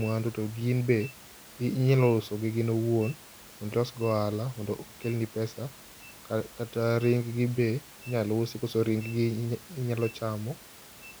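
Nothing in the system seems to have gone wrong here; the only thing beyond the speech is the room's own background noise, sitting about 22 dB beneath it.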